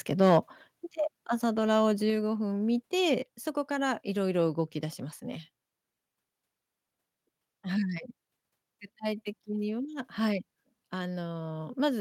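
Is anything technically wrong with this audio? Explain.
Yes. From 0.24 to 0.38 s the loudest part of the speech has a harsh, crackly edge that points to microphone overload. The signal likely ran about 3 dB past the converter's ceiling, so the wave tops were sliced flat, with roughly one sample in twenty clipped. Unlike codec distortion, which smears and warbles, this crackle follows the peaks exactly and clears as soon as the level falls.

The microphone volume is stepped down three times, at 1.08, 3.12 and 5.16 s. Voice and background drop together by about 4 dB, then about 1 dB, then about 2 dB. Each is an instant step in the input setting, as if software were reining in the loud start, rather than the smooth ride of an automatic gain control or a fade. The room tone falls along with the voice, so the speaker did not simply move away.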